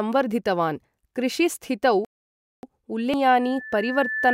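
At 2.05 s the speech cuts out into silence for about 0.58 s, resuming at 2.63 s. This is a playback stall, most likely caused by the player running short of buffered data or its output thread being held up, so nothing reached the output until it caught up. On a waveform it is a flat, silent gap with abrupt edges. A spectrogram shows a clean vertical band of empty time across all frequencies.

At 3.14 s there is a brief glitch, the mark of damaged data in a compressed stream. Some of the encoded frames here were corrupted, so the decoder misread them, lost frame sync and skipped forward to the next valid header. The result is a short disturbance in the speech. A spectrogram shows a thin, smeared vertical streak or blocky patch that doesn't match the surrounding harmonics. The waveform has a tiny spike or discontinuity.

From 3.40 s to the end, a loudspeaker feedback squeal sets in. The microphone is picking up the speaker it drives, and at 1.8 kHz the loop gain exceeds one, so that tone feeds on itself. 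It swells over roughly a second into a piercing whistle that ends up about 5 dB above the speech. On a spectrogram it is a steady horizontal line at 1.8 kHz that brightens over time. The waveform envelope grows steadily into a dense, sinusoidal band.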